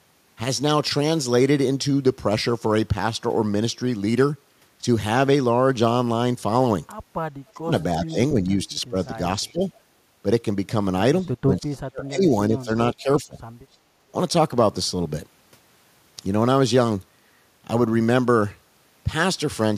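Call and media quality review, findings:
Speech suppressed in double talk at 7.52–7.72, 8.12–8.95, 9.43–9.61, 11.42–12.29, 12.49–12.72 and 12.94–13.36 s. Speech dips or drops out, deepest about 40 dB near 11.4–12.3 s. Likely loudspeaker-side echo canceller treating overlapping talk as echo and attenuating both.

Echo leak at 8.05–8.13 and 11.23–11.29 s. Brief delayed copy of speech, 357 ms late, about 25 dB then about 35 dB below the talker. Likely loudspeaker-side echo canceller leaving residual microphone pickup, sent back down the line.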